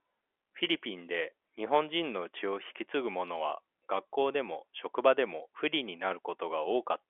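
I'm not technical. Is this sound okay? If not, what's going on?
Yes, nothing is wrong with this recording.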